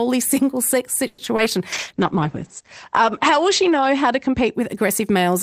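Just after "single sex", from 1.07 to 1.20 s, the sound stretches into a fading buzz for 110 ms, likely a call audio freeze. Delayed packets emptied the jitter buffer, inserting a gap. On a spectrogram it looks like smeared horizontal streaks.

Two short concealed packet losses follow at 1.24 to 1.28 s and 1.36 to 1.40 s. Each lost 20 ms, filled by extrapolation, heard as a brief smear with a slight blur in the waveform.

From 1.73 to 4.60 s a call bitrate drop from 64 to 11 kbps, bottoming out for about 2.2 s, makes the sound rough and muffled. The spectrogram shows energy cut off above 8 kHz, where it previously reached 20 kHz.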